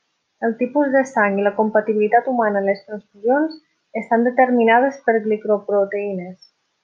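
Listening closely to the speech, nothing stood out as a technical problem at any point.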